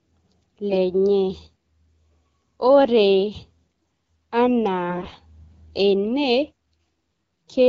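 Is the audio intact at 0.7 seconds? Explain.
No. From 0.70 to 0.78 s, AMR bit errors hit the coded stream, corrupting roughly a tenth of the less-protected bits across a span that fits about four frames. Misplaced excitation pulses and skewed pitch, gain and spectral values make the speech briefly hoarse, scratchy and gargly while pitch and level roughly hold.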